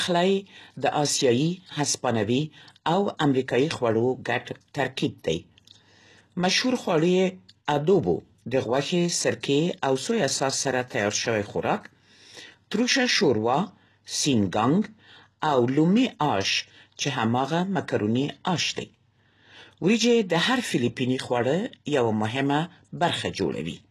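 A speech recording of about 24 seconds, with audible codec damage throughout. The treble sounds synthetic rather than captured: sibilants come out gritty and lispy, upper harmonics fail to line up with the lower spectrum, and nothing is present above about 12.3 kHz. The likely cause is HE-AAC compression at a rate that fits roughly 16 kbps, where the core coder carries only the lower band and spectral band replication copies that material upward under a coarse envelope to fake the top end. There is also a pre-echo from 7.65 to 7.68 s. A short hiss, about 24 ms long, runs ahead of a sharp onset, and the attack itself sounds blunted. This happens because the transform block containing the transient spreads its quantisation noise across its whole length. The noise, scaled for the loud onset, therefore also fills the quiet moment just before it.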